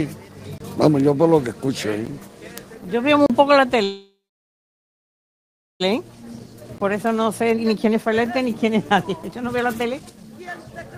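At 0.58 to 0.60 s, at 2.06 s, and at 3.26 to 3.30 s there is a block of digital silence. Each time the output buffer likely went unfilled: 23 ms, which fits a 1024-sample buffer, then 12 ms, which fits a 512-sample buffer, then 35 ms. The signal cuts out and back with no fade. The waveform shows a flat line with sharp cliffs, and the spectrogram shows a blank vertical strip bracketed by thin broadband streaks.

From 3.83 to 5.82 s comes a call audio freeze, likely caused by packets held up in transit until the jitter buffer ran dry. The receiver stretched the last sound into a fading buzz or hiss that dies to silence for about 1.7 s. When the audio resumes, it picks up exactly where it stopped, so nothing is lost but about 2 s of delay is added. The spectrogram shows smeared, repeating horizontal bands thinning into an empty stretch.

From 5.94 to 10.51 s the jitter buffer speed-up drains that backlog. 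Short pitch-period pieces are cut repeatedly, so the sound runs at about 118% speed with its pitch unchanged and seems hurried, shedding roughly 0.7 s in total. The spectrogram looks horizontally compressed, with harmonic spacing intact and tiny seams at the splices. Inside this stretch, at 6.78 to 6.80 s, another 21 ms block of digital silence appears as a flat gap with abrupt edges.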